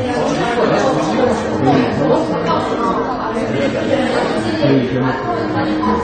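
A recording of sounds shows AAC compression throughout, most likely from AAC-LC encoding at a low bitrate; the damage fits a rate around 32 kbps. With so few bits, the encoder discards content it judges least audible and cuts the top of the spectrum entirely, leaving nothing above 9 kHz. The result is plainly audible: a dull, muffled top end, smeared detail, and a warbling, fizzy texture on sustained and hissy sounds.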